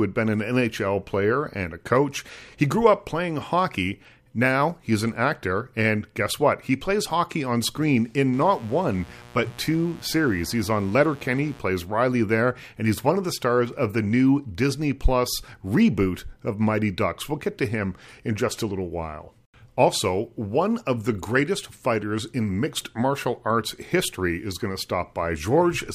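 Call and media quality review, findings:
Mains buzz, 8.33 to 11.59 s, starting right after "hockey on screen in". Steady raspy buzz on a 60 Hz base, about 25 dB below the speech. Probable component: dimmer, rectifier or unshielded line. Switching spikes twice per mains cycle inject 60 Hz harmonics up to several kHz.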